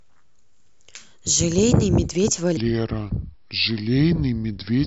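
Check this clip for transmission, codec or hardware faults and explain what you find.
One fault is present. From 2.57 s to the end there is a wrong sample rate: the audio is played slower than it was captured, with no conversion, which fits 44.1 kHz material played at 32 kHz. Speed drops to 0.726 times and pitch falls 5.6 semitones, so the speech turns low and sluggish.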